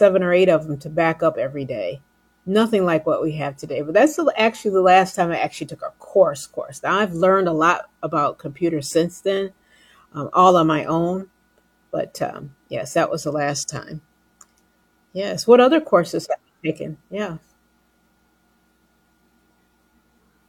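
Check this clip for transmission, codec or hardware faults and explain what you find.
No faults detected.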